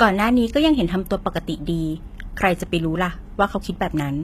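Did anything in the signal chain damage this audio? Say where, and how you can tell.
Yes, at the codec stage: gritty, lispy sibilance throughout and nothing above 14.9 kHz point to likely HE-AAC compression at a low bitrate near 20 kbps, its replicated treble unlike a plain low-pass.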